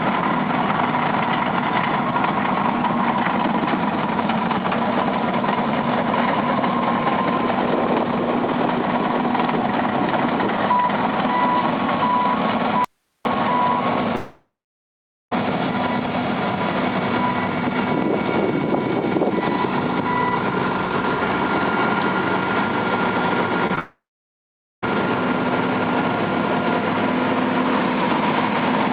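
At 12.85 s the sound cuts out abruptly for 0.41 s, leaving only hiss about 50 dB below the normal level before it returns mid-flow. This is an audio dropout to a faint residue, likely from the wanted signal being lost while the path after the break stayed live.

From 14.15 s to 15.33 s the last sound carries on as a fading buzz or hiss, then gives way to about 0.83 s of silence, and the audio resumes with roughly 1.16 s missing. This is a long network dropout, likely from no packets arriving, so the receiver stretched the final sound until it had nothing left.

At 23.67 to 23.71 s and again at 23.75 to 23.79 s there are brief smears, about 20 ms and 14 ms long. This is short concealed packet loss: the receiver filled each small hole by continuing the preceding sound and blending back into the real audio.

Immediately after, from 23.79 s to 24.84 s, the sound again trails off into a fading buzz or hiss and then about 0.84 s of silence, with roughly 1.04 s never played. 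This is another long network dropout, likely another stretch where no audio arrived, that follows straight on from the concealed losses.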